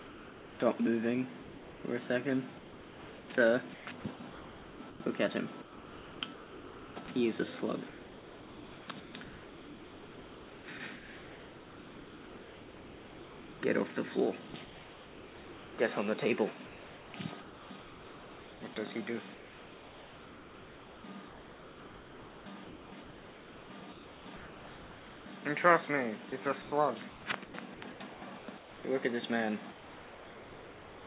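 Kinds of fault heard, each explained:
Sound chopped by the voice detector: The sender's voice detector likely kept toggling transmission on and off. Quiet passages were swapped for comfort noise. From 0 to 13.6 s, 14.5 to 15.8 s, 16.7 to 25.3 s and again from 26.3 to 28.8 s, the sound stutters.
Sound dropped by the voice detector: From 29.72 s to the end, the sound gives way to steady comfort noise and never returns. The detector likely judged this final stretch to be background and stopped sending entirely.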